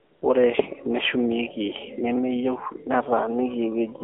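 Right from the start, 0 to 0.22 s, there's AMR comfort noise. The phone decided nobody was talking and sent no speech frames for that first 215 ms, so the receiver filled the gap with synthetic noise built from a rough sketch of the background's level and spectral shape. You hear a smooth, steady hiss instead of the real room, and then it switches off abruptly when actual speech frames arrive.

Across the whole clip you've got the AMR narrowband mobile codec, AMR-NB, and the damage is plainly audible. The speech is confined to the phone band, roughly 300 Hz to 3.4 kHz, so it sounds thin and boxy with no air on top. The codec rebuilds the voice from a vocal-tract model excited by a handful of pulses per subframe. At this bit rate, which fits a low mode around 7.4 kbps, that gives a buzzy, synthetic edge to the voice.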